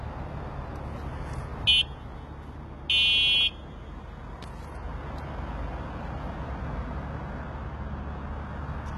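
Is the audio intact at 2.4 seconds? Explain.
No. At 2.4 seconds, as through the whole clip, there is likely HE-AAC compression. Nothing is heard above 11.7 kHz. Upper bands are rebuilt by copying lower ones upward, so high detail sounds gritty and metallic. The heavy damage fits about 16 kbps.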